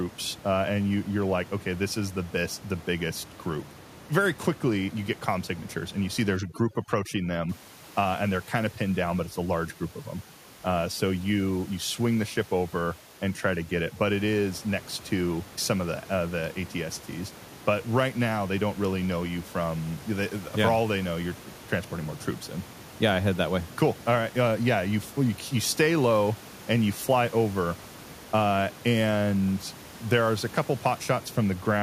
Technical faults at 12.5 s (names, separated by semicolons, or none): overdone noise removal